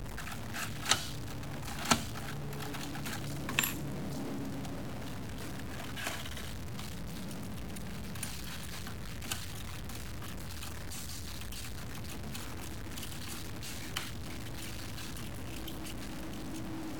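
From start to finish the sound carries a harsh, buzzy distortion, and the quiet stretches fill with a steady noise floor instead of falling silent. This is the pattern of a stuck bit, likely a data bit held at a fixed value, so that about half the samples jump by a step of roughly -40 dBFS. Clipping distorts only the peaks, but this error rides on quiet passages and fills the pauses as well.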